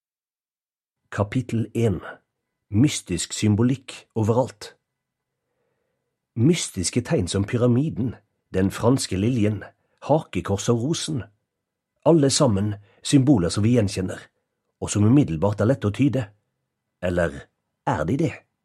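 No dropouts, clicks, distortion or level jumps can be heard anywhere in the audio, so there is nothing to flag.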